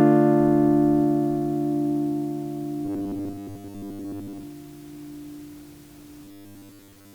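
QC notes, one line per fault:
2.85–4.43 s and 6.24–7.14 s: robotic sound from repeated short buffers. The sound turns into a rigid, metallic 100 Hz buzz. It is likely caused by audio arriving too slowly, so a 10 ms slice is replayed over and over while most of the real material is skipped.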